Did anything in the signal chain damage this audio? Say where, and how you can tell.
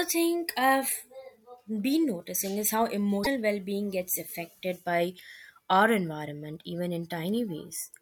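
Yes. A broken MP3 bit reservoir is the likely cause of the damage at 3.23 to 3.27 s, a codec-stage fault. In that 40 ms span the speech breaks with a brief disturbance and resumes slightly further along, as though a piece had been skipped. The length fits one or two frames of about 24 ms. When frames are lost, the next frame reaches back for borrowed bits, decodes bytes from the wrong frame and produces garbage until it resynchronises.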